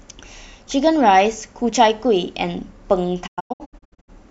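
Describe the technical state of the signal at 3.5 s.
A digital broadcast dropout covers 3.5 s, running from 3.26 to 4.10 s. The receiver stopped getting decodable frames, whether from signal loss or frames failing their checksum, and muted its output until valid data resumed. The speech breaks into several short holes scattered across that span, each opening with a quick 20 ms fade. The longest gap lasts 96 ms, and about 512 ms of the transmitted audio is lost in total.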